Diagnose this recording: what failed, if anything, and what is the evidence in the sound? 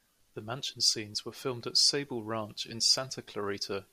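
Nothing failed; no fault is audible at any stage.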